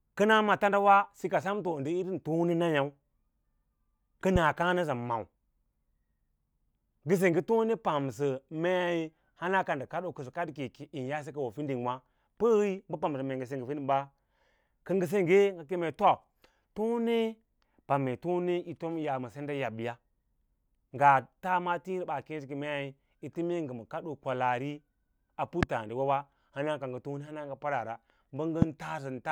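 A speech recording with three loud pops. They fall at 4.36 to 4.38 s, 25.63 to 25.65 s and 28.62 to 28.64 s. Each is a single sharp click lasting about 25 ms. The first peaks roughly 15 dB above the speech, the later two nearer 20 dB. The speech continues underneath each pop. The likely cause is a brief electrical pulse, such as a connector, switch, static discharge or driver glitch, that entered the signal path.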